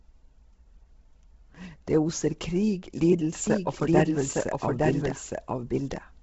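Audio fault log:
throughout Bluetooth LC3 compression. The speech has a breathy, grainy edge. Nothing is heard above 7.7 kHz. The top of the band has been cut away and partly refilled with noise. The damage is heavy. The likely cause is the LC3 codec of Bluetooth LE Audio working near its low end. The artefacts point to a rate around 16 kbps with 10 ms frames.
3.47 s to end, doubled audio track. A second full-band copy of the speech enters abruptly at 3.47 s and runs to the end. It trails the original by about a second and is about as loud. The copy has no decay and no room colour, so it is not an echo. The likely cause is the same signal being captured again by a slower path, or an edit that left two copies out of step.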